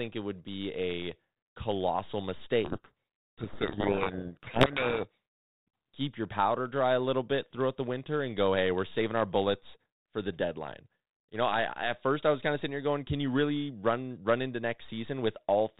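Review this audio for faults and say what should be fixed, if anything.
From 2.64 to 5.18 s, just after "would be a colossal", there is a codec payload misread. The two ends of the link disagreed on how each G.726 code word is packed, which fits the bit order being reversed, so the decoder read valid-looking code words with their bits in the wrong places. The speech is buried under harsh, rasping distortion until the formats match again, while the 32 kbit/s G.726 path around it carries only light, band-limited coding noise. To prevent this, fix the G.726 bit-packing order in both endpoints' configuration and confirm that both use the same one.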